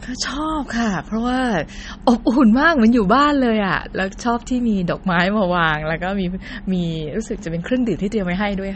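Speech with plainly audible damage throughout, likely from MP3 compression at a low bitrate, consistent with about 32 kbps. All treble stops at 8.4 kHz, a flat ceiling on a spectrogram, and weak components below it flicker in and out as speckled gaps, heard as a watery swirl.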